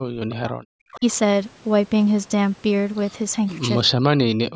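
From 0 to 0.71 s there is speech suppressed in double talk: the speech drops by about 40 dB, likely because an echo canceller, faced with both sides talking at once, could not separate its own talker from the loudspeaker echo and turned everything down.

At 0.92 to 1.0 s comes an echo leak, a faint copy of the speech arriving about 359 ms late and about 20 dB below it. This is likely the loudspeaker side's canceller letting part of its microphone pickup slip back into the call.

Immediately after, from 0.99 to 1.05 s, speech is suppressed in double talk again. This time the dip is shallower, about 15 dB.

From 3.93 s to the end, speech suppressed in double talk returns with drops of about 40 dB.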